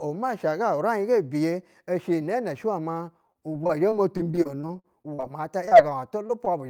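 Speech with packet-loss damage in its second half, concealed by the receiver each time. From 3.27 to 5.25 s there is repeated packet loss with a robotic sound: audio goes missing in a rapid run of short holes, the longest about 45 ms, and each is patched by extending the preceding sound before the next hole arrives. Roughly a fifth of that stretch is synthetic fill, which gives the choppy, robot-like texture with fragments dropped. After that, short concealed packet loss occurs at 5.65 to 5.69 s, immediately again at 5.69 to 5.73 s, and at 6.27 to 6.31 s. Each loses about 20 ms, which fits a single lost 20 ms frame. The decoder bridges each one by continuing the last pitch or noise shape and then crossfading back. The result is a brief smear or wobble, and the back-to-back pair near 5.7 s produces a slightly longer wobble.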